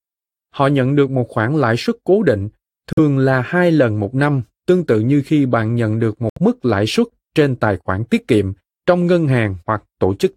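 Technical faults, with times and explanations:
2.93 to 2.99 s and 6.30 to 6.39 s, Bluetooth dropout: the wireless link likely failed to deliver audio packets to the headphones in time, so they were discarded and the output fell silent. The first gap, between "lãi suất cố định" and "là hai lần một", and the second, between "khi bạn nhận được" and "mức lãi suất trên", have abrupt edges or a fade of a few milliseconds. The speech resumes further along, as if it had played on. About 46 ms and 70 ms of audio are missing, which fits two and three lost packets.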